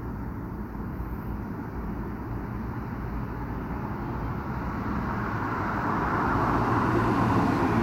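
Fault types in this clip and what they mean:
No technical faults can be heard in this audio; the signal stays continuous and stable throughout, with nothing that points to a recording, transmission or playback problem.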